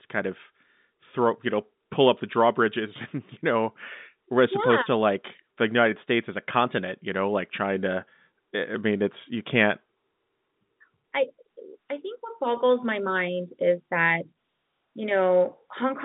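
No faults are audible in this speech; the telephone path sounds as expected for G.711, with the band sitting at roughly 150 Hz to 3.7 kHz.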